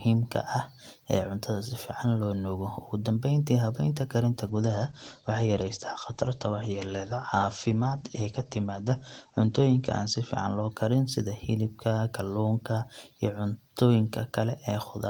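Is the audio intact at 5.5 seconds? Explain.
No, a call bitrate drop runs from 4.46 to 10.77 s. The encoder is starved of bits, so the speech turns coarse and watery, with highs cut above 8 kHz, fitting roughly 12 kbps.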